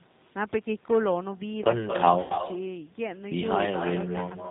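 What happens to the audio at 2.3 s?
VoIP packet loss concealed by the speech codec, from 2.22 to 2.43 s: about 120 ms of audio went missing, scattered across 160 ms with the longest gap near 80 ms. The decoder filled the gaps by extending its last pitch and filter state at falling gain, so the sound smears into a buzzy, fading tone and stays weak briefly after audio resumes.

Echo with no canceller also runs through this moment. The far end's loudspeaker feeds its microphone, returning a thinner copy about a fifth of a second later, only about 5 dB quieter.

The G.729 codec's damage is plainly audible here too. Nothing above 4 kHz survives, and the rebuilt sound is rough and synthetic, which fits an 8 kbit/s G.729 stream.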